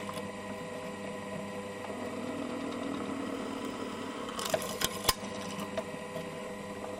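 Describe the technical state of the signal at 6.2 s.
At 6.2 s the signal is intact, with no audible technical fault at that moment.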